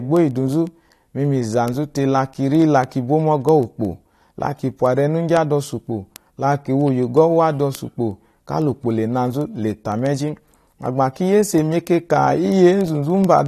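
Word clock ticks run from 0.17 s to 13.46 s: sharp ticks of uneven strength, roughly every 70 ms, around 200 in all. A receiver clocked independently of its digital source, off by something like 300 ppm, drops or repeats one sample at each slip.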